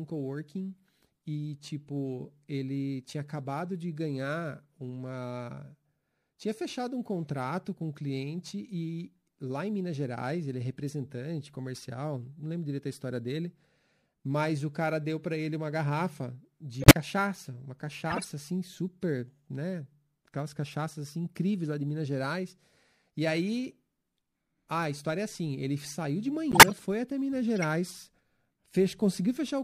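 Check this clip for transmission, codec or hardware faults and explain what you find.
Two faults are audible in the speech: a watery coding sound throughout, and four short bursts where damaged frames were decoded.

MP3 compression, whole clip: sibilants swirl and chirp as weak frequency lines flicker between frames. This is plainly audible damage and likely comes from MP3 encoding at a starved bitrate, consistent with around 64 kbps.

Corrupt frame decoded, at 16.82–16.94 s (after "para ele uma garrafa"), 18.10–18.26 s (before "assim super né"), 26.51–26.72 s (between "assim ele saiu de" and "foi até"), and 27.62–27.65 s. Flipped bits made the decoder place energy at wrong frequencies across a few frames each. The result is chirpy noise bursts, the first and third loud, around -5 dBFS, and the others quieter, around -20 dBFS.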